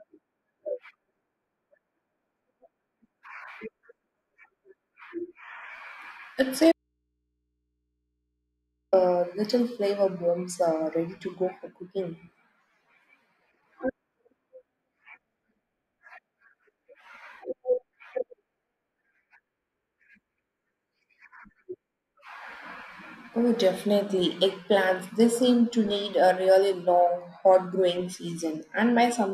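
The wanted signal feed likely dropped out while the recording path stayed live, so this speech clip shows an audio dropout to a faint residue from 6.72 to 8.93 s: about 2.2 s of abrupt silence holding only mains hum, roughly 55 dB down, before "little flavor bombs uh".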